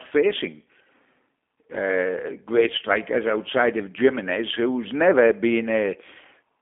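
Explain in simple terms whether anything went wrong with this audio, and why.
Yes, something did go wrong. From start to finish the speech sounds thin, slightly rough and a little robotic, like a cheap internet phone call, with no crispness in sounds such as s and f. That is the G.729 codec at work: instead of sending the actual sound, it sends a rough recipe for a voice and rebuilds it at the other end. Everything above about 3.6 kHz is gone, and the deep bass below roughly 250 Hz is trimmed too.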